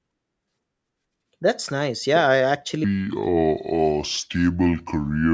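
From 2.84 s to the end, the speech has a wrong sample rate fault: it drops to two-thirds speed and sounds about 7 semitones lower, slow and heavy. This fits 24 kHz audio played back at 16 kHz with no conversion. On a spectrogram, harmonics and formant bands slide downward from 2.84 s onward, and syllables stretch wider in time. In the waveform, individual cycles visibly lengthen by the same 1.5× factor.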